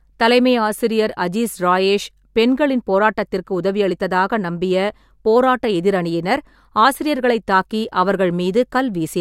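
Nothing technically wrong turns up anywhere in this short bit of speech, so there's no fault to point to and no time or cause to give.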